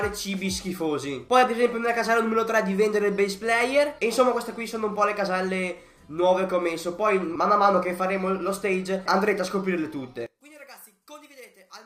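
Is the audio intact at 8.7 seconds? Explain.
Yes, the audio at 8.7 seconds is intact, with no dropout, click, distortion or other technical fault audible at that point.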